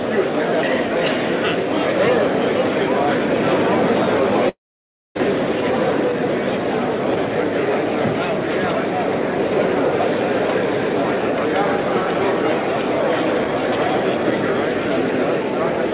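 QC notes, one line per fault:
4.49–5.18 s, long network dropout: the sound smears into a fading buzz, then sits near-silent for 0.58 s and picks up again with 0.66 s gone. Likely the packets stopped arriving and the receiver's concealment filled the gap. Nothing above 4 kHz, which fits G.711 mu-law.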